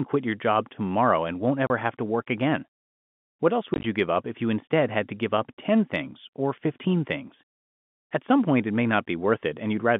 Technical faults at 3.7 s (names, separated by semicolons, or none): packet loss filled with silence